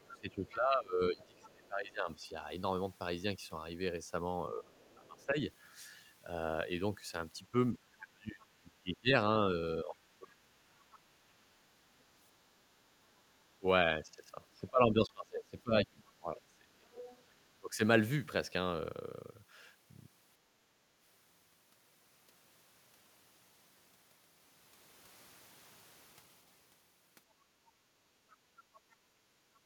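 From the start to 10.51 s, and again from 13.59 to 17.81 s, the speech is pulled down in pieces, as much as roughly 25 dB at its deepest and for around four and then three seconds in total. This is speech suppressed in double talk, likely because the echo canceller could not separate the talker from loudspeaker echo while both sides spoke. Unlike a gate on the background, the talker's own voice is what dips and loses its edges.

A second voice, the other side's voice leaking through, appears faintly at 0.06 to 1.67 s, 4.88 to 5.26 s, 10.8 to 10.99 s, 16.97 to 17.18 s and 28.31 to 28.80 s. It sits well below the talker, weakest around 5 s and near the end and strongest around 17 s. This is likely residual loudspeaker echo the canceller missed. It is an added voice rather than a loss of level.

At 15.07 s a Bluetooth stall cuts the sound to dead silence for about 17 ms and then resumes. The likely cause is late packets draining the headphone buffer. 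Unlike the canceller's dips, this is a hard gap, not a drop in level.

From 28.03 s to the end, the room sound is background gated by the echo canceller, dipping by about 9 dB for roughly a second and a half while the far end plays.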